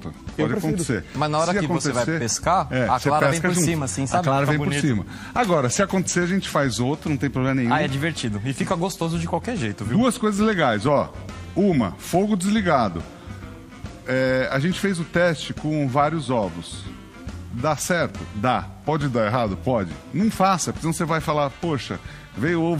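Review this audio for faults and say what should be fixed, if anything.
Drift correction step at 3.32–4.48 s and 7.05–8.26 s, where the sound runs about 6% fast and rises roughly a semitone (102 cents), and at 18.85–19.69 s, where it runs about 6% slow and drops about 108 cents, each snapping back afterwards. This is likely clock-matching software resampling in one abrupt jump to correct its buffer level. To prevent it, apply drift correction as small, continuous rate adjustments spread over time.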